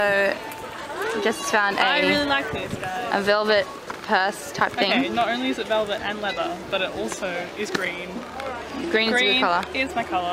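No audible technical faults occur anywhere in this audio.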